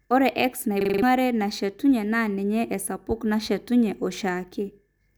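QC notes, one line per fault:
0.81–1.02 s, system hang loop: the speech freezes and one tiny slice, about 42.7 ms long, repeats exactly five times, giving a rattly machine-gun stutter at roughly 23 hits per second. The computer or its audio driver stalled, but the sound card kept replaying the same buffer, which fits a 2048-sample ring. Whatever should have played there, about a fifth of a second, is simply gone.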